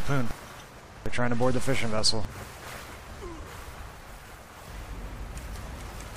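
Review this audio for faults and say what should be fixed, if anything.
An overlap between stream segments causes a tiny skip at 2.29 s. Two segments claim the same moment, so a few milliseconds are trimmed and the waveform jumps. Fix it by making each segment's timestamps start exactly where the previous one ends.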